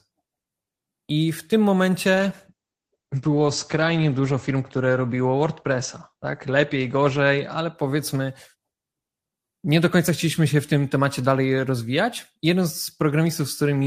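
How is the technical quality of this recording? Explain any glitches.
The recording is degraded by one glitch. From 2.16 to 9.25 s, a call bitrate drop from 32 to 12 kbps starves the encoder, so speech turns coarse and muffled and the spectrogram goes blank above 8 kHz.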